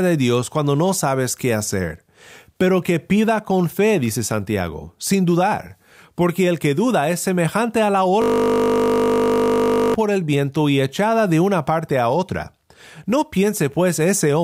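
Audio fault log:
8.22–9.94 s, system hang loop: after "es semejante a la", one 20 ms slice of speech repeats exactly, over 80 times, giving a rigid 50 Hz buzz until "por el viento y" resumes. Unlike mains hum, it cuts in and out abruptly and carries frozen speech timbre.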